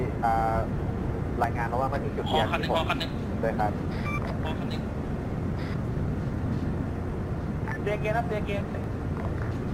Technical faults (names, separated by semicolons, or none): dropped buffer (overrun)